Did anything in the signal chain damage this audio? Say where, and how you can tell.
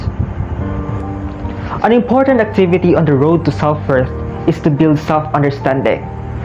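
No, nothing in the signal chain audibly damaged this audio, so there is no stage to point to.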